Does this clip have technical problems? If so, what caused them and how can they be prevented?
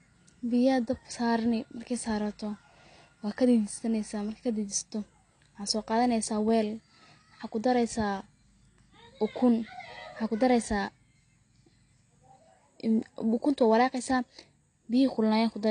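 Yes. Throughout the speech the sound is dull and smeared, with a fizzy, warbling edge on sibilants. This is likely AAC compression, where AAC-LC quantises each frame's frequency lines so coarsely that weak bands are dropped or swapped for noise, which fits a low bitrate of around 32 kbps. On a spectrogram, energy stops flat at 9.8 kHz, with patchy holes and blocky texture below it. To prevent it, encode at a higher bitrate or keep an uncompressed master.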